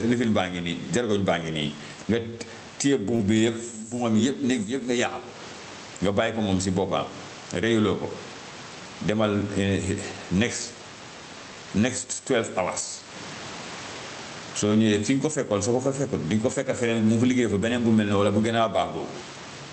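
It's a speech recording with gain pumping all the way through. The level swings by something like 15 dB, likely from gain set too high feeding a fast limiter. At about 3.15 to 3.21 s there's a short concealed packet loss: roughly 40 ms went missing and about 35 ms was patched by extending the previous sound, so you hear a brief smear. The call path's top end stops around 8 kHz, which fits a wideband call codec.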